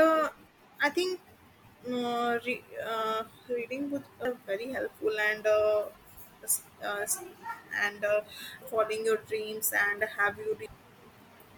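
At 4.25, 8.62 and 10.66 s the speech hits damaged data in the compressed stream: bad bytes make the decoder misread frames and lose sync until it finds the next header, so each spot comes through as a brief chirp or blip.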